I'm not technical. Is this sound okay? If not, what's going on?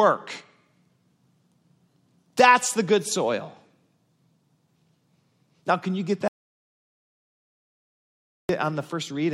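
No. There is an audio dropout to silence from 6.28 to 8.49 seconds, right after "can you get". The speech cuts off into total silence for about 2.2 seconds, likely because the input connection briefly failed, so whatever was said then is lost.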